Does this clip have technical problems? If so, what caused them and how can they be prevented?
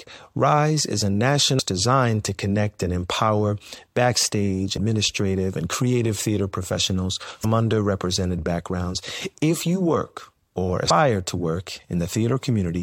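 Yes. Damaged data in a compressed stream: parts of the encoded speech arrived corrupted, so the decoder could not read those frames correctly, lost its place, and had to hunt for the next valid frame header before decoding resumed. Each time this produces a brief chirp or blip lasting under 20 ms, heard at 1.58 s, 4.76 s and 7.43 s. Preventing it means carrying the stream over a transport with checksums or error correction and verifying file integrity before playback.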